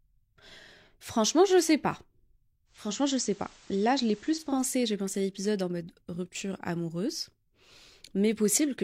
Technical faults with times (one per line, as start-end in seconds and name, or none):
2.65-4.63 digital radio blending to analogue